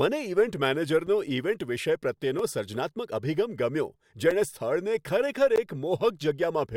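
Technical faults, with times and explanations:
1.07 s, 2.39 s, 4.31 s and 5.56 s, block of digital silence: the output buffer was not filled in time, so short runs of samples went out as zeros, lasting about 5.3 ms, 2.7 ms, 5.3 ms and 16 ms. The two 5.3 ms gaps fit a missed 256-sample buffer. Because the speech cuts straight to zero and back with no fade, the shorter gaps sound like ticks, and the 16 ms one like a brief hole in the voice.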